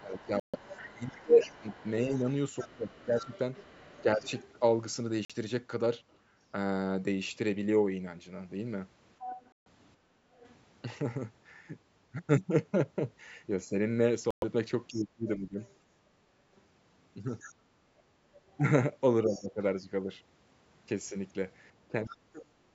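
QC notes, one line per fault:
0.0–4.24 s, 10.03–10.11 s, 14.88–15.59 s, 19.25–22.75 s: speech suppressed in double talk. With both ends talking at once, the echo canceller most likely could not tell the near talker from the loudspeaker echo and turned both down. The speech dips for around a second and a half in the first span, falling by about 20 dB. It cuts out for a very short moment near 10.1 s, sinking by about 25 dB. It drops for about half a second near 15 s, again by about 20 dB. In the final stretch it falls by as much as about 40 dB for roughly a second in total.
0.12–6.18 s, 9.19–10.55 s, 15.6–22.15 s: other side's voice leaking through. The far end plays on a loudspeaker, and the echo canceller likely left part of it in the microphone signal. A second voice runs underneath the main speech. It sits about 20 dB down in the first and last spans and rises to about 15 dB below the speech around 9–10 s.
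0.40–0.56 s, 5.25–5.32 s, 9.52–9.67 s, 14.31–14.44 s: Bluetooth dropout. Audio packets likely failed to reach the headphones in time and were discarded, so the output fell silent until valid data resumed. The holes last 139, 46, 139 and 116 ms. After each one the sound picks up further along, as though it had carried on playing through the gap.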